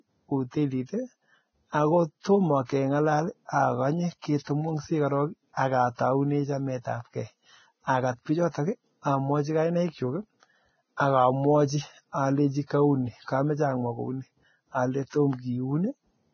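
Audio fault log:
Throughout: Vorbis compression, likely at a very low bitrate like 16 kbps. Nothing above 6.5 kHz, and coarse treble quantisation leaves the speech hissy, grainy and smeared.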